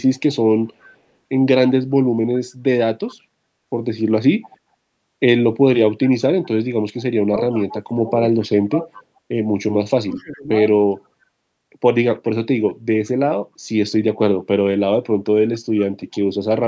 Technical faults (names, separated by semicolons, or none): echo leak; speech suppressed in double talk